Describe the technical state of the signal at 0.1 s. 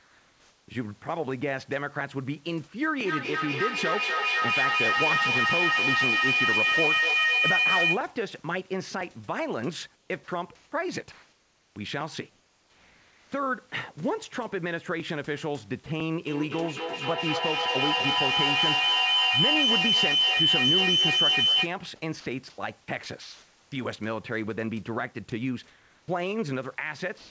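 Comfort noise in place of the background runs from 0.00 to 0.68 s, covering the moment at 0.1 s. The room's real background, sitting about 38 dB below the loud parts, gives way to a smooth, featureless hiss about 2 dB quieter, lacking the texture of the genuine room noise. The likely cause is discontinuous transmission: with no speech detected, the sender paused and the receiver synthesised shaped noise to fill the gap, all within a G.722 band ending at 8 kHz.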